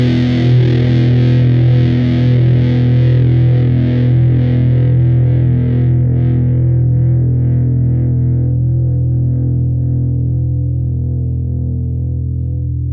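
No technical faults can be heard anywhere in this audio.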